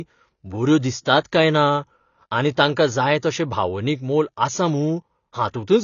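From start to end, the speech carries damage that is likely from AAC compression. Nothing is left above 6.9 kHz. The top of the spectrum is simply gone. The encoder has cut that region away to save bits, which fits a low bitrate of around 24 kbps. Below the cut-off, coarse quantisation leaves holes in the spectrum or fills bands with substitute noise. The damage is plainly audible. The speech sounds dull and smeared. Sustained sounds and sibilants take on a warbling, fizzy texture.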